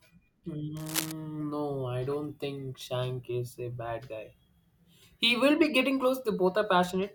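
Speech with cable scratch noise from 0.77 to 1.12 s, a dense, uneven rustle nearly as loud as the voice, likely from a worn cable or connector being moved, unlike isolated clicks.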